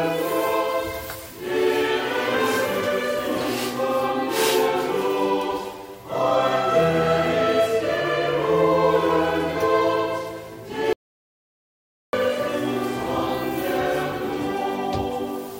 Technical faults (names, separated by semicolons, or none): audio dropout to silence